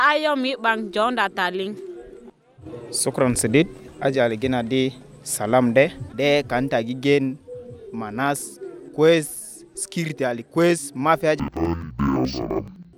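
From 11.40 s to the end, the sound drops an octave, doubled and choppy, stuttering about 11.7 times a second. This is interleaved audio read as planar: each 85.33 ms block, which fits a 4096-sample block, is split into halves played together at half speed.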